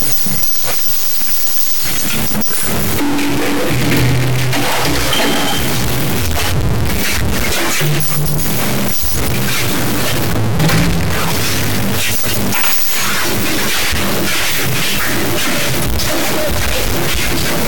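From start to end, harsh buzzy distortion rides on every sound. A stuck bit, likely a high one near -10 dBFS, shifts half the samples and fills quiet gaps with noise.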